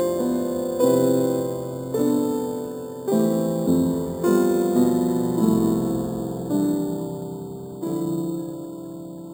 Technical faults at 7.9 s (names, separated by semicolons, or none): imaging from sample-and-hold upsampling